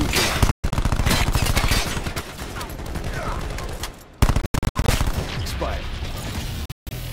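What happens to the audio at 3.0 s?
Nothing goes wrong at 3.0 s; the audio there is intact, with no dropout, click or other fault at that moment.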